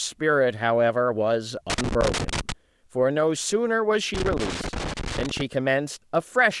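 Speech, with two bursts of loose connector crackle: one from about 1.70 to 2.52 s and a longer one from 4.14 to 5.41 s. Each is an uneven spray of scratchy crackle over the speech, the kind you get when a worn or grubby contact keeps making and breaking as the cable or plug shifts. The signal gets chopped in rapid, irregular fragments, and any DC sitting on the line turns those breaks into little pops.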